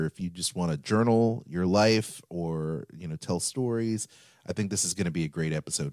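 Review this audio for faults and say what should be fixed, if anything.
No faults; nothing to fix.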